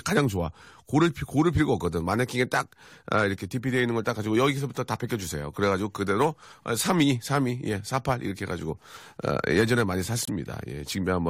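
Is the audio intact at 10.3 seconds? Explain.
No. A corrupt frame muted fault cuts the speech from 10.25 to 10.29 s. Damaged compressed data was rejected by the decoder and replaced with silence, a 40 ms hole that fits two frames. A waveform shows an abrupt flat gap, and a spectrogram shows a blank vertical band.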